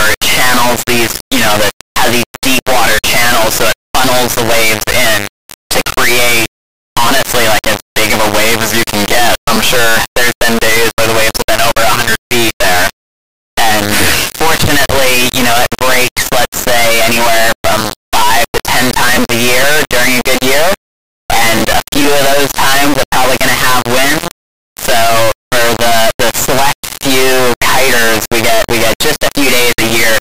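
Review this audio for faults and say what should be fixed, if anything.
Integer read as float affects the whole clip, from start to finish. The samples were written as 32-bit integers but read back as 32-bit floats. The same bits then decode to values that are nearly zero, invalid, or far beyond full scale. The output jumps between silence and the clipping limit. What should be heard becomes a buzzing, square-wave-like signal that cuts out where the source is quiet. To prevent this, declare the sample format in the file header and have the reader check it before decoding.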